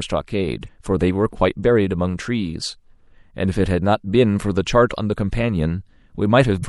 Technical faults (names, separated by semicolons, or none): MP3 compression; damaged data in a compressed stream